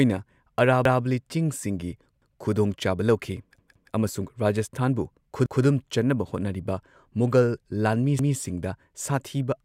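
Repeated buffer stutters occur at 0.85, 2.22, 3.58, 5.46 and 8.19 s. New audio arrived late, so the last chunk replayed. Each repeat lasts 0.17 s, which fits an 8192-sample buffer, with a hard join. At 3.58 s it repeats twice, to 3.93 s.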